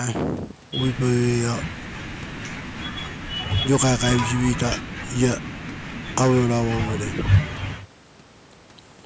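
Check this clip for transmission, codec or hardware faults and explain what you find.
Nothing faulty turned up in the speech: the band tops out at 8 kHz and the lowest bass is trimmed, both consistent with normal call microphone processing rather than a defect.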